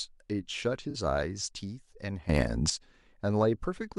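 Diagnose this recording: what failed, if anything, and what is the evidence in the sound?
Codec stage: AAC frame loss with concealment at 0.90 to 0.96 s, a smeared, phasey patch of about 43 ms, which fits two lost frames, rather than a clean dropout to silence.

Processing stage: sudden gain jump from 2.29 to 2.70 s. Speech and background noise rise together by about 13 dB with no ramp, likely a gain setting applied instantly rather than the talker getting louder.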